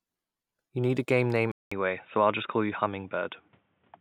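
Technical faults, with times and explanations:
1.52–4.01 s, input switched to a poorer device: after a gap of about 200 ms, the speech continues with a duller, boxier tone that lasts to the end of the clip. Nothing is present above 3.8 kHz, so sibilance and upper harmonics disappear, and a faint new background noise sits well below the speech. Loudness stays roughly the same. The sudden band-limiting after a brief dropout is likely caused by the recording input changing mid-take to a narrower-band microphone.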